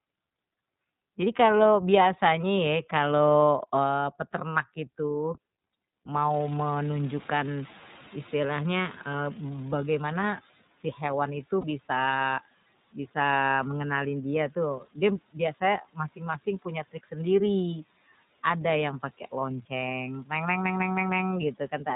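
Throughout, the speech is band-limited and slightly rough, with a faintly synthetic edge. Nothing is heard above 4 kHz. This is the iLBC codec at work. It is a narrowband VoIP coder that rebuilds each 30 ms frame independently from a compact description of the excitation, and the damage is plainly audible here. The character fits iLBC's 13.33 kbps mode.

From about 6.3 s the background gets noticeably louder. The room noise jumps by about 22 dB at roughly 6.5 s and then sits about 23 dB below the speech. At first much of that new noise comes through, and then it gradually sinks until about 10.49 s. This is the noise suppressor catching up. Its noise estimate lagged the sudden rise and took about 4.19 s to settle, eventually pulling the noise down by about 11 dB.

Between 10.63 and 10.99 s, brief stretches of speech, totalling around a tenth of a second or more, sound swallowed and faint, dipping by up to about 11 dB. 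This is speech cut by the noise suppressor, which briefly mistook quiet speech energy for background and attenuated it along with the noise.

At 11.61 s there is a short held, slightly buzzy sound lasting 30 ms, and the voice returns to normal immediately afterwards. These are lost iLBC frames. The decoder filled a gap that fits a single lost 30 ms frame by repeating the last pitch cycle mixed with noise. Because each iLBC frame stands alone, recovery is almost instant.

The suppressor clips speech again in a cluster from 15.82 to 16.2 s, 16.38 to 16.66 s and 16.92 to 17.14 s. Each time, quiet parts fade, by up to about 16 dB in the first and about 17 dB in the other two. These deeper cuts make the affected syllables sound swallowed.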